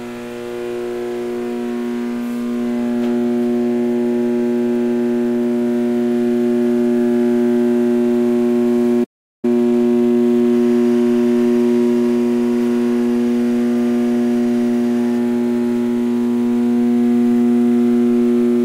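At 9.03 s the sound cuts out and stays silent until 9.45 s, a gap of about 0.39 s. This is a playback stall, likely caused by the player running short of data or its thread being blocked. On a waveform it appears as a flat gap, and on a spectrogram as an empty vertical band.

From 9.45 s to 10.23 s the player works off its backlog with time-compressed catch-up. It drops small slices and cross-fades the joins so the audio runs at 1.5 times speed without any change in pitch. The events crowd together on a spectrogram, and the seams show as tiny smeared joins.

Between 10.53 s and 15.18 s there is timecode bleed, heard as a steady chirping warble behind the sounds. Linear timecode from a nearby track or cable has leaked in, switching between tones around 1 kHz and 2 kHz at about 30 dB below the signal. Its rhythm fits 23.976-frame code. On a spectrogram it appears as two thin horizontal lines an octave apart, flickering throughout that span.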